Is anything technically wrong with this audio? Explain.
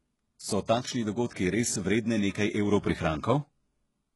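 Yes. Heavy codec damage runs through the whole speech clip, and its character points to HE-AAC compression as the likely cause, at a very low rate of around 12 kbps. Only the lower spectrum is properly coded, and the treble is rebuilt by copying lower bands upward under a coarse envelope, so its harmonics don't line up with those below. The s sounds come out gritty and metallic. On a spectrogram the upper region looks like repeated, smeared copies of the lower bands, and nothing appears above 11.5 kHz.

At 1.27 to 1.31 s there is pre-echo. A sharp attack falls late in a transform block, and the quantisation noise sized for the loud onset is spread across the quiet moment before it, about 38 ms. A short hiss is audible just ahead of the attack, which itself sounds softened and smeared. On the waveform, low-level noise rises before the transient instead of the signal starting cleanly, and on a spectrogram a broadband haze leads the onset.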